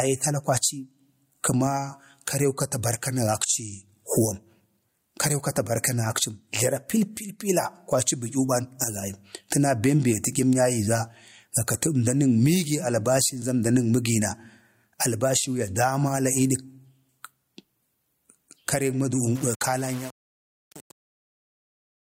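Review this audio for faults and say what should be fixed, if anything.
Gain pumping runs through the whole clip, with the gain swinging by around 15 dB. The dynamics sound squashed, with loud and soft parts pushed close together. The likely cause is mic gain set far too high, with a fast limiter or compressor clamping down on every peak and letting go in the pauses. To prevent it, back off the input gain and ease up on the limiter so it isn't catching every peak.

Truncation distortion on the fade starts at about 19.35 s and lasts to the end at 22.04 s. As it gets quieter, though, the tail turns gritty. The waveform is collapsing into a few coarse steps because the fade stage isn't keeping enough bits and isn't dithered, which fits an 8-bit stage. To prevent it, do the fade at full bit depth and add dither when reducing word length.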